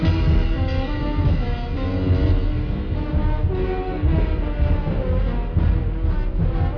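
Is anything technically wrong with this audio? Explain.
Yes. From start to finish the audio plays at half speed and a full octave, 12 semitones, lower. This is a wrong sample rate fault: the samples are played back unconverted at half their intended rate, which fits 44.1 kHz material played at 22 kHz, so everything sounds slow and deep.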